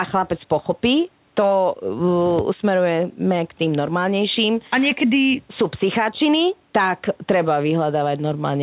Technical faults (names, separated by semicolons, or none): none